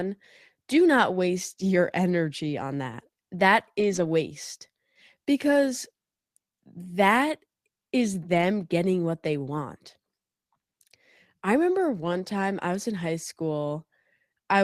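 At 2.07–2.09, 2.91–2.93, 3.79–4.05, 8.33–8.43, 9.47–9.49 and 12.01–12.07 s the speech briefly turns grainy and a bit hissy, but it never drops out. That's the lost packet rebuilt from error correction: each missing chunk was replaced by the low-bitrate backup copy riding in the next packet, so you get a rough patch instead of a hole. The long one near 3.8 s covers seven separate packet losses.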